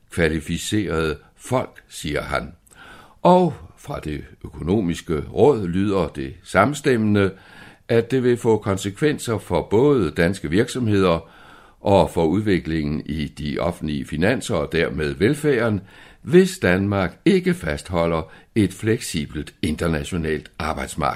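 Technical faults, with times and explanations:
Nothing technical stands out in this speech recording; there's no fault to flag here.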